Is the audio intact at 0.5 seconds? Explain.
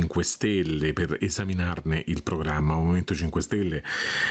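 No. At 0.5 seconds the audio is affected by gain pumping, present throughout the clip. Gain set far too high is likely pulled down by a fast limiter on each loud sound, swinging roughly 20 dB. Loud and soft parts end up closer in level, and the sound is squashed. On a waveform the level looks flattened, with the noise floor rising between peaks. The band stops near 8 kHz, as the call path passes nothing higher.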